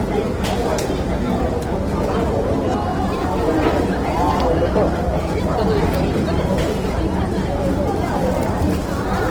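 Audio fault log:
Throughout: Opus compression, likely in its CELT music mode at a rate that fits 16 kbps. Bit-starved bands are refilled by folding lower bands or with noise, so tones turn plainly grainy, rough and noisy, while the bandwidth stays full to 20.2 kHz.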